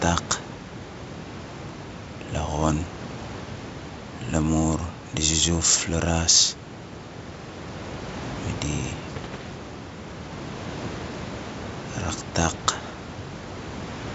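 Two bursts of bit errors on an ADPCM link occur, from 9.09 to 9.50 s and from 12.49 to 12.74 s, on a wideband call that sounds like G.722. Flipped bits corrupt the decoder's step size and predictor state, so each error keeps ringing for a few milliseconds instead of staying a single click. At an error rate of roughly 0.3 percent, this produces clusters of pops, rough crackly bursts and brief jumps in level.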